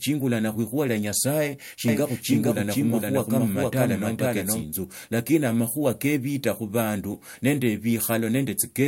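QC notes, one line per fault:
1.88–4.64 s, doubled audio track: the speech was most likely picked up a second time through a slower path, so a second full-band copy rides about half a second behind the original at roughly equal loudness. Because the copy carries no decay or room colour, it reads as a clean, out-of-step duplicate rather than an echo, blurring syllables against each other. It switches in at 1.88 s and drops out at 4.64 s abruptly.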